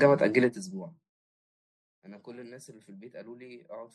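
From 0.42 to 1.03 s a fast ticking rides on the speech as its level falls by about 25 dB: zipper noise, from gain stepping roughly 100 times a second without smoothing.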